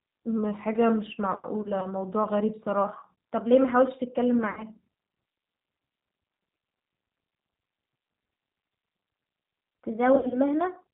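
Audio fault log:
Throughout: G.729 codec, plainly audible. Speech rebuilt from a filter and pulses at 8 kbit/s, so nothing above 4 kHz and a slightly rough, synthetic edge.
0.38 to 2.84 s: drift correction step. Speech runs about 6% slow and drops 110 cents, a bit over a semitone, then snaps back, likely a clock-matching rate change.
9.89 to 10.89 s: drift correction step again, this time about 6% fast and 103 cents sharp before returning, likely the same buffer-balancing correction going the other way.
1.62 to 1.87 s, 4.51 to 4.65 s, 10.15 to 10.38 s: VoIP packet loss concealed by the speech codec. Roughly 40, 60 and 100 ms go missing, and the decoder stretches the last sound into a fading buzz, so the speech stays weak briefly afterwards.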